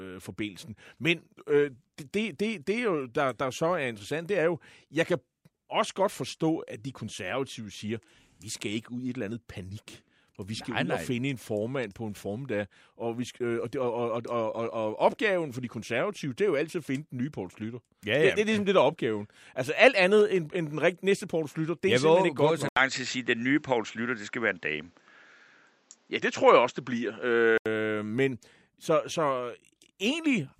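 From 22.69 to 27.66 s, starting at "men så så", speech turns duller after an 80 ms gap, likely an input switched to a poorer device: the spectrogram shows nothing above 7.7 kHz, a new faint noise floor and a small level step.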